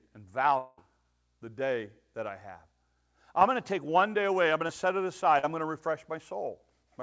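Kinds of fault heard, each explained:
Long network dropout: From 0.58 to 0.79 s the audio turns into a smeared, buzzy continuation of the last sound for about 0.2 s with no true silence, then jumps ahead with that stretch missing. It's likely a network stall covered by the receiver's fill-in.
Short concealed packet loss: A few hundredths of a second went missing and the decoder patched over them by extending what came before. You hear a quick smear between "one day away I'm" and "to set it" at 4.67 to 4.71 s, and a longer wobble from 5.39 to 5.45 s before "I'm going to".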